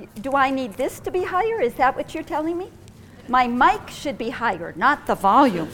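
No technical faults can be heard anywhere in the audio. At no point does anything in the sound show that the signal chain went wrong.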